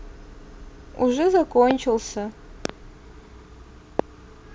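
Three loud pops cut into the speech. The first lands at 1.71 to 1.73 s, a single sharp hit roughly 20 dB above the voice. The second, at 2.65 to 2.72 s, is a double pop, slightly softer at around 15 dB above. The third, at 3.99 to 4.02 s, is again single and about 20 dB up. Each sounds like a brief thump on top of the talking, which continues underneath. The likely cause is sudden voltage spikes, from static, a switch or a driver glitch.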